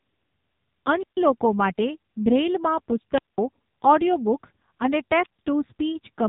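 From start to finish the speech carries the sound of the AMR narrowband mobile codec. Nothing passes above about 3.8 kHz, so sibilants and consonant detail are cut off. The coder rebuilds each 20 ms frame from a vocal-tract model excited by a handful of pulses, and here the damage is heavy: the voice is buzzy and synthetic, which points to one of the lowest AMR-NB modes, around 5.9 kbps.

Three wireless microphone squelch dropouts interrupt it. In each, the radio signal from an analogue FM microphone fades far enough that the receiver's squelch mutes the output. The first runs from 0.99 to 1.17 s, the second from 3.14 to 3.38 s, and the third from 5.22 to 5.39 s. Each one is a short burst of rising hiss followed by a hole of near silence, about 139 ms, 198 ms and 130 ms long in turn, before the voice returns.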